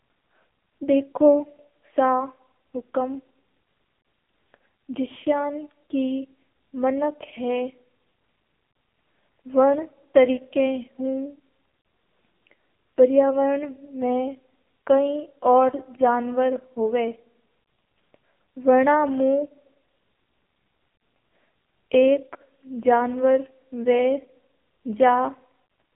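Throughout, the speech sounds buzzy, thin and synthetic, with nothing above 3.8 kHz: heavy AMR narrowband mobile codec damage, consistent with a low mode around 6.7 kbps.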